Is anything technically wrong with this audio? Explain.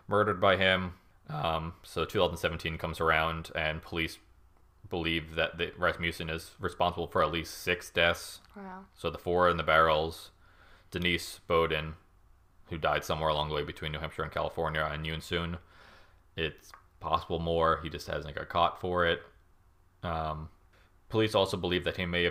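No, nothing technically wrong can be heard in this speech recording. No fault turns up at any point in the audio.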